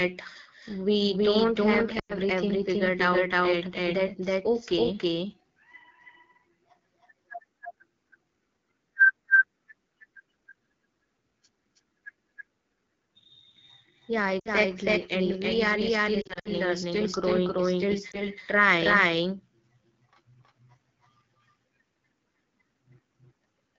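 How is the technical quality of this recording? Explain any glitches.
The quality is rough: three problems affect it.

Throughout, there's a doubled audio track. A second full-band copy trails about a third of a second behind at roughly equal level, likely from a second, slower capture path, so everything sounds echoed without any room tail.

The whole clip also carries AMR wideband (HD Voice) codec damage. Speech sounds raspy and gritty, which fits one of AMR-WB's lowest rates, around 8.85 kbit/s, where its vocal-tract model gets coarse.

Then there are lost AMR speech frames, where the decoder fills gaps by reusing old pitch settings with fading gain. At 1.99–2.13 s, right after "we don't have", about 100 ms drops to near silence. At 14.39–14.51 s there's a 60 ms drop to near silence. Between 16.21 and 16.48 s, after "we are still" and before "still growing still trying", short dropouts are scattered across 240 ms. 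At 18.11 s, after "still growing still", there's a tiny blip.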